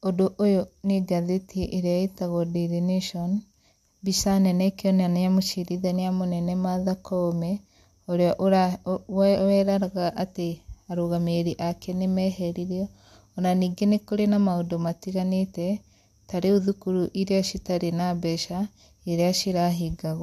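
No technical faults can be heard in this speech recording. Nothing goes wrong at any point in the audio.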